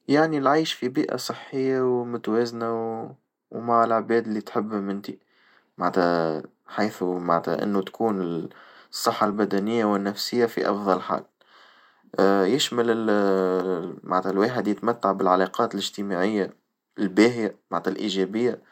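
Speech clip with two brief underruns with held sample, at 9.33 s after "معنتها إنو تكون الصحة" and at 14.79 s after "معناتها الواحد". Each holds the waveform flat for 0.73 ms, consistent with a 32-sample output dropout, before playback resumes where it stopped.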